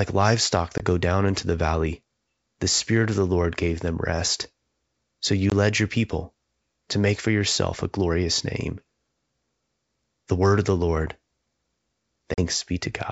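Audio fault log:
0.78–0.80 s (before "go down into the"), 5.50–5.52 s (before "led your people to"), 12.34–12.45 s: packet loss on an ADPCM call. Hard-edged 20, 20 and 40 ms silences; the speech then returns slightly distorted while the decoder's predictor and step size resynchronise, unlike a clean dropout.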